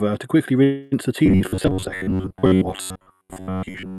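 All the way through, one channel sits a few samples behind the other, about 0.07 ms, so the mono sum gets channel delay comb filtering, with a fixed notch around 7 kHz giving a hollow, phasey sound.

At 0.63 s, right after "to quickly", there's a call audio freeze, likely packets stalling and the jitter buffer running dry. The last sound gets stretched into a fading buzz or hiss until 0.94 s, then picks up at "the tea" with nothing lost, just about 0.28 s late.

From 1.26 s to the end you get robotic sound from repeated short buffers: most of the audio is replaced by repeats of a tiny chunk, giving a rigid metallic buzz near 94 Hz that fits roughly an 11 ms buffer.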